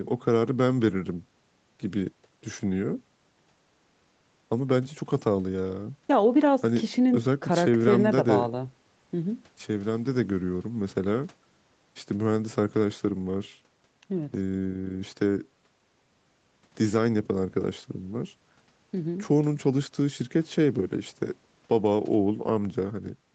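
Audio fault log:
The speech carries the ordinary signature of a call path, with nothing audible above 8 kHz as expected from the call's microphone processing and codec, and no fault is present.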